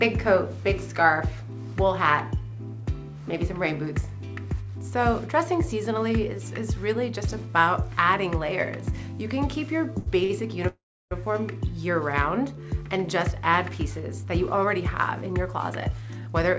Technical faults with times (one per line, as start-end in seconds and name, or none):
9.98-10.31 short stall from a late packet
10.67-11.13 call audio freeze
14.24-16.59 jitter buffer speed-up